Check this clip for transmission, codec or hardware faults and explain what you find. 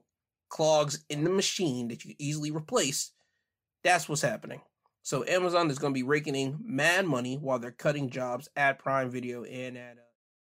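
No faults found.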